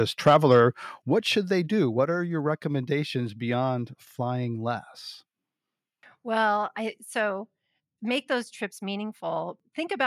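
Likely set too high, the microphone input drove peaks about 3 dB past the converter's limit from 0.26 to 0.57 s, flattening a small fraction of samples into a harsh, crackly edge before "what should they do". At 1.02 s, the call software likely stepped the microphone volume down by about 6 dB in one move, so the speech and background drop abruptly in level before "what should they do".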